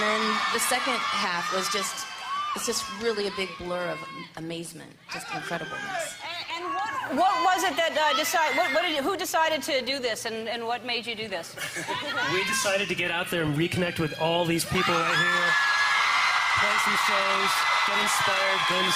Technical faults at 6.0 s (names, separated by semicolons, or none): none